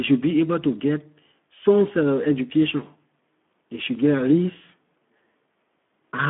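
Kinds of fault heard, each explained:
Speex codec: a CELP speech coder running at a low rate, which fits a setting around 11 kbps, leaves too few bits for the excitation, so the speech carries plainly audible rough, noisy coding damage and sits in a telephone-like 200 Hz to 3.5 kHz band, with nothing above 3.8 kHz.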